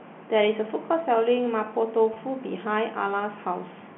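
Speech over a telephone-band line, carried in G.711 coding that limits the sound to roughly 200 Hz to 3.4 kHz, with one instance of packet loss with pitch repetition from 2.14 to 2.16 s. About 20 ms of audio is missing, consistent with a single lost packet, and the receiver fills it by repeating the last pitch cycle. This gives a brief held, buzzy sustain rather than the silent gap or click of a plain dropout.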